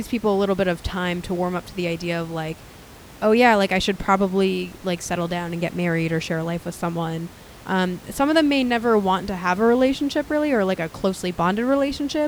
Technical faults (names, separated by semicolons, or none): none